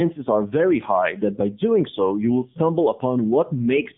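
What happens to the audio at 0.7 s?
At 0.7 s the speech is passing through the AMR narrowband mobile codec, which runs for the whole clip. The codec samples at 8 kHz and rebuilds the voice from a vocal-tract model excited by a few pulses per 5 ms subframe. Its audible damage points to a low rate around 7.4 kbps. The line band sits at 150 Hz to 3.6 kHz with nothing above 3.7 kHz, so the voice sounds thin, muffled and buzzy, with a plainly synthetic edge.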